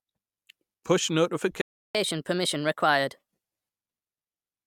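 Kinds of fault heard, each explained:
Playback stall: The speech cuts out abruptly mid-flow at 1.61 s and stays silent until 1.95 s, a gap of about 334 ms. The likely cause is the player's buffer running dry or its output thread being blocked, so nothing reached the output until it recovered. When sound returns, the silence marks where delivery was interrupted.
Catch-up at higher speed: Immediately after the stall, from 1.95 s to 3.28 s, the speech plays 1.25 times faster than normal to work through the backlog. Because this is done by resampling, pitch rises along with tempo, here by roughly four semitones, giving a brief chipmunk-like lift and clipped pacing. At 3.28 s the rate drops back to normal and the pitch returns to its natural level.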